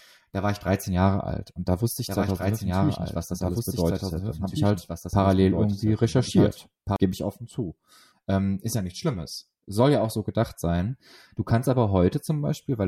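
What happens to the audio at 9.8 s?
Nothing goes wrong at 9.8 s; the speech continues intact through that moment with no dropout, click or distortion to be heard.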